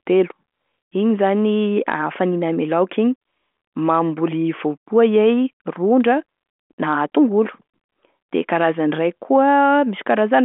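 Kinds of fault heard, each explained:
No faults can be heard in this speech. The G.726 ADPCM telephone path at 40 kbit/s is working as intended, keeping the sound within about 200 Hz to 3.4 kHz with nothing above 3.8 kHz, and any coding hiss is faint at most.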